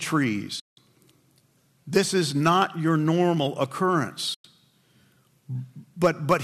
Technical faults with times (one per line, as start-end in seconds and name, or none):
0.59-0.78 digital broadcast dropout
2.46-2.62 hard clipping
4.34-4.45 digital broadcast dropout
6.04-6.34 hard clipping